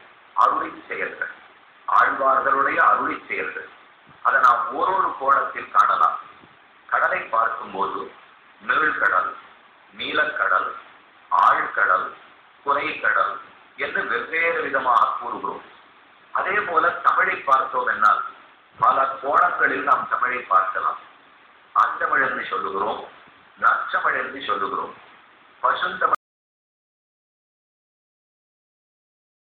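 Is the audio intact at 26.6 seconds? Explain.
No, 26.6 s falls in an audio dropout to silence from 26.15 s to the end. The sound cuts off abruptly with no room tone left, unlike a fade or quiet passage, likely from lost input.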